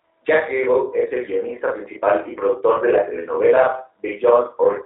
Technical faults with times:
0.00-4.85 channel delay (doubling)
0.00-4.85 G.729 codec
2.77-2.82 VoIP packet loss concealed by the speech codec

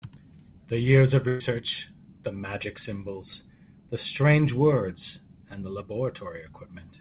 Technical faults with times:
1.28-1.42 burst of packet loss

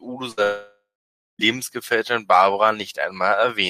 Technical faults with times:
0.31-0.40 burst of packet loss
0.43-1.42 long network dropout

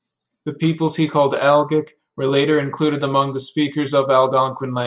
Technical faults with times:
none

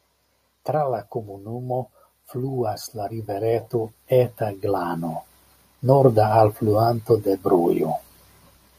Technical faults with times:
1.12-5.21 automatic gain rising

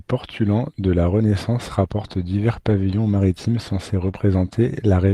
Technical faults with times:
2.69-2.71 lost packet rebuilt from error correction
4.07-4.17 lost packet rebuilt from error correction
4.11-4.15 short concealed packet loss

